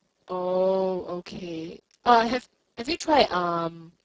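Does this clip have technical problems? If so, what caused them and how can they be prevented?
Yes. The whole clip carries heavy Speex codec damage: the speech sounds hoarse, noisy and close to robotic, which points to a very low setting of around 6 kbps, where the CELP coder has too few bits left to describe the excitation properly. To prevent it, run Speex at a higher quality setting or switch to a modern codec such as Opus.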